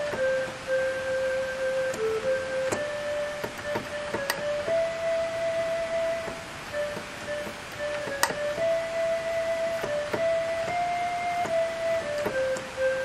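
No technical faults are audible.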